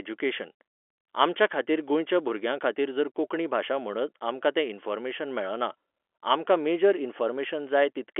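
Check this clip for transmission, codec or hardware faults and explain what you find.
The speech carries no transmission, codec or hardware fault: it sits in a telephone band of roughly 300 Hz to 3.4 kHz, consistent with G.711 mu-law coding at 64 kbit/s, with at most faint coding noise following the signal level.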